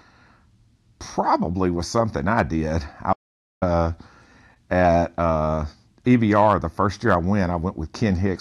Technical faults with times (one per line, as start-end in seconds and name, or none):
3.12-3.63 playback stall